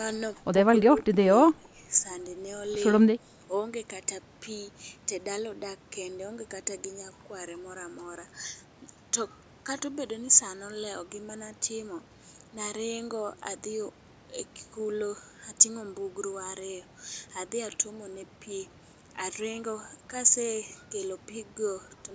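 At 0.96 to 1.18 s, 1.51 to 1.77 s and 3.18 to 3.39 s the speech is pulled down, by about 20 dB in the first dip and about 10 dB in the others. This is likely speech suppressed in double talk, where the echo canceller mistook overlapping talk for echo.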